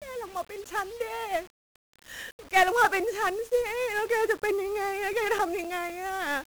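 From start to finish the speech is fuzzy and crackly, its treble buried in hiss. This is heavy 1-bit DFPWM compression, whose single bit per sample (fitting roughly a 48 kbps stream) leaves strong broadband quantisation noise. Between 5.13 and 5.90 s, four brief ticks, the longest only a few milliseconds, are CD scratch ticks, where unrecoverable data was patched over once per disc turn.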